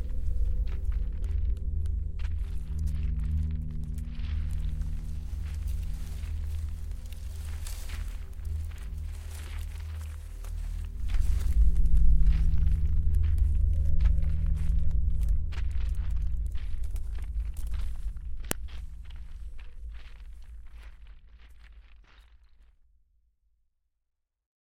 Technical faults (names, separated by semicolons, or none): file header played as audio